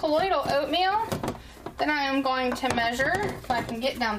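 No faults audible anywhere in the clip.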